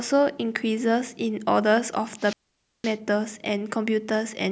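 At 2.18 s a wireless microphone squelch dropout begins: the FM radio link fades, hiss swells, then the receiver's squelch mutes output for about 0.51 s before speech returns by 2.97 s. A spectrogram shows broadband noise, then a blank gap; the waveform collapses flat.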